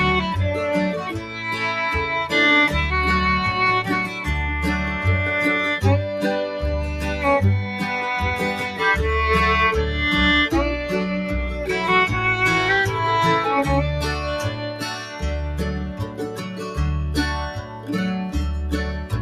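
The audio pumps and thins throughout, with sustained parts and decays rising and sinking in a level swing of around 5 dB while sharp onsets stay intact. This is a noise suppressor applied to music or sounds: a speech-tuned suppressor is reading steady, non-speech content as noise and pulling it down. Distinct dips also appear where the sound is cut by the noise suppressor: 1.13 to 1.43 s (about 6 dB), 14.5 to 15.23 s (about 7 dB), 15.84 to 16.78 s (about 8 dB) and 17.58 to 17.9 s (about 7 dB). In each, held or fading material sags or has its tail clipped short.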